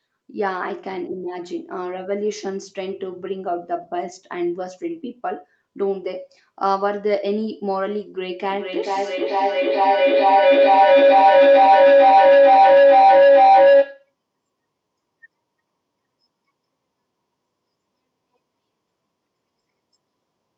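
Two devices in the same room sharing the call let the microphone-to-loudspeaker loop gain level on every pass, so this speech develops a feedback howl from 8.44 to 14.14 s: a tone near 500 Hz, with repeats roughly every 0.4 s, peaking about 11 dB above the speech.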